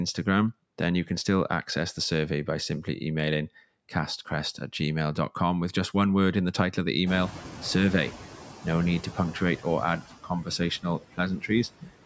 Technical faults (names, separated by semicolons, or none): noise suppressor artifacts; noise suppressor catching up; speech cut by the noise suppressor